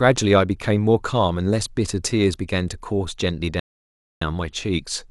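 At 3.60 s the player exhausted its downloaded audio, a rebuffering stall: the speech drops to silence until 4.21 s, then resumes exactly where it stopped, adding 0.62 s.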